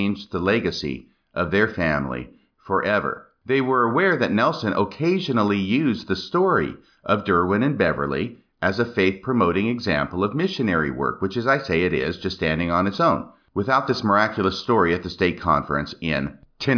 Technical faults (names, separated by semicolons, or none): none